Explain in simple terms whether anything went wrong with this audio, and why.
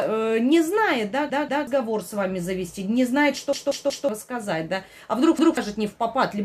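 Something did go wrong: a repeated buffer, three times. New audio arrived late, so the player looped its last chunk, about 0.19 s, with a hard jump each time. You hear stutters at 1.3–1.67 s, 3.53–4.09 s and 5.39–5.57 s, with about 0.4 s, 0.5 s and 0.2 s of audio skipped.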